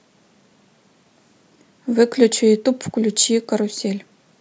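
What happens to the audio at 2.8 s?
Nothing goes wrong at 2.8 s: the speech continues without a dropout, click, glitch or other fault at that moment.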